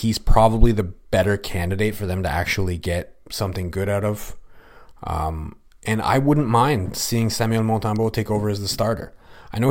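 An electrical switching spike lands at 7.96 s in the speech: a single sharp snap, peaking around -25 dBFS, sitting on top of the sound rather than replacing it. It is likely an arc from a nearby switch, motor or static discharge, picked up by the audio line as a brief burst of interference.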